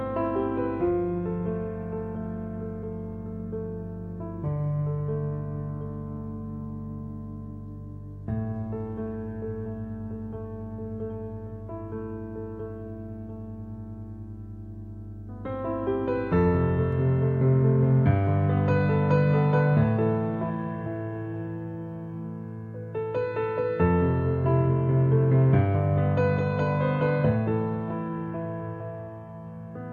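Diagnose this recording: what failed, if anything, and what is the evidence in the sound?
The failure is in the analogue wiring: mains hum runs from the start of the recording to 16.93 s, a steady 50 Hz tone with low harmonics sitting only moderately below the signal, about 15 dB down. A ground loop or nearby transformer coupled the power line into the signal path. Unlike broadband rumble or handling noise, it holds one fixed pitch tied to the mains frequency and its multiples, and it ends at 16.93 s.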